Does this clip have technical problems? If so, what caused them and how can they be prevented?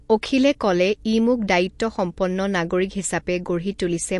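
Yes. Throughout the speech there's a hard ceiling at about 11.3 kHz and plainly audible swirly, watery smearing, likely from MP3 compression at a low bitrate, something like 48 kbps. The encoder ran short of bits, lopped off the top band and kept dropping weaker detail. Encoding at a higher bitrate, or keeping a lossless copy, would avoid it.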